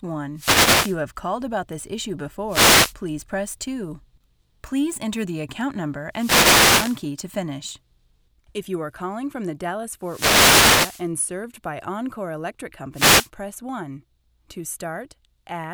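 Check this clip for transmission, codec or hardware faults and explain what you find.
The speech has one recurring transmission fault: wireless microphone noise hits at 0.35–0.98 s, 2.48–2.94 s, 6.11–7.04 s, 10.01–11.10 s and 12.93–13.29 s. Each time, the analogue FM radio link fades as reflected copies of the signal cancel the direct one, and the receiver's own noise rises into the gap. The result is a brief swish or burst of static, lasting from about 0.4 s to just over 1 s, laid over the speech.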